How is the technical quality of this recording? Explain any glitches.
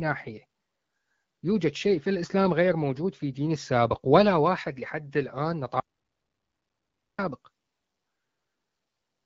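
The speech has one clear glitch: an audio dropout to silence. At 5.8 s the speech cuts off mid-flow. Nothing is heard until it resumes at 7.19 s, so about 1.4 s is lost. The gap is dead digital silence with no room tone or hiss beneath it. The likely cause is a brief loss of the input, such as a disconnected device, a failed link or a stray mute, while the recorder went on writing silence. Whatever was said during the gap is gone. The speech also passes through the AMR wideband (HD Voice) codec at 12.65 kbit/s, which leaves it clear with only light coding damage.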